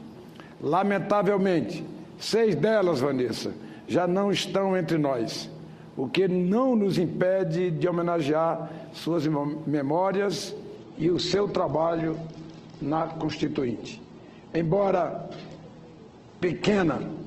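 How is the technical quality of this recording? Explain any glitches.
The recording has one fault: from 10.76 s to the end, an adaptive stream at a lower bitrate. The connection apparently slowed, so playback switched abruptly, without a gap, to a much leaner encoding. Nothing above about 8.2 kHz remains, treble turns dull, and codec artefacts rise, consistent with a drop from roughly 64 to 12 kbit/s Opus.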